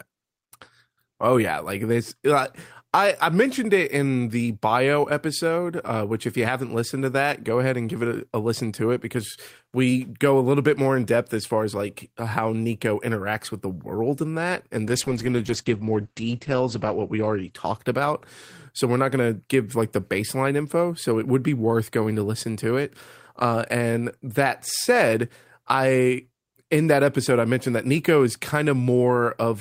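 Speech with a call bitrate drop from 14.87 to 18.63 s: the sound turns muffled and watery, cut above 8 kHz, which fits a fall to about 11 kbps. Unlike packet loss, it is continuous, with no dropouts.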